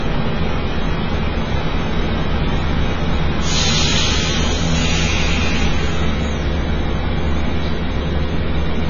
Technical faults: AAC compression

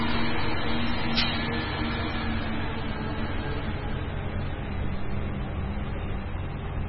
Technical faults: MP3 compression

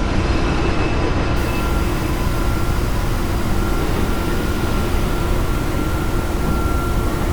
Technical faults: low bit depth without dither

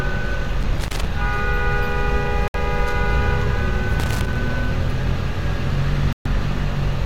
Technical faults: loose connector crackle; digital broadcast dropout

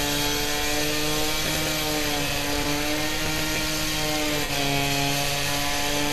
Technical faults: corrupt frame concealed

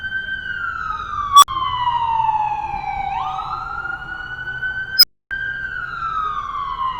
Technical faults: unstable filter

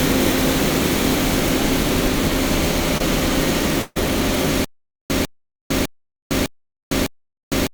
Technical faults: short concealed packet loss; burst of packet loss; stutter with silent gaps

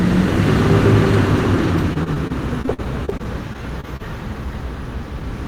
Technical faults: repeated packet loss (robotic sound)

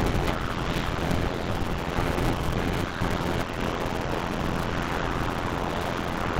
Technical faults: block size mismatch (padded); sound chopped by the voice detector

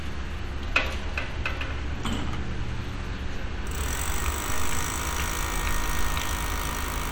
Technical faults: none

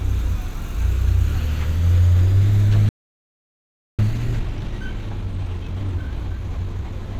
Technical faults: playback stall; time-compressed catch-up

